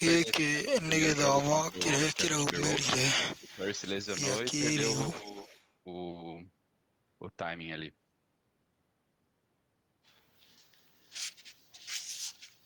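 A speech recording with two recurring hands-free call faults. Speech suppressed in double talk occurs from 0.21 to 0.9 s, 1.68 to 1.82 s and 3.38 to 3.63 s: the level dips by about 15 dB in the first and third spans and about 20 dB in the second, the audio thinning or dropping out in pieces. The likely cause is an echo canceller that, with both ends talking at once, could not distinguish the near talker from loudspeaker echo and attenuated everything. Echo leak appears from 1.38 to 2.17 s, 2.53 to 2.87 s, 3.31 to 3.71 s and 5.04 to 5.67 s as a delayed copy of the speech trailing it by 349 to 351 ms, about 10 dB below the speech at its strongest, falling to about 15, 30 and 25 dB down in the later spans. This is likely residual echo from a loudspeaker-phone path whose canceller left part of the microphone pickup unremoved.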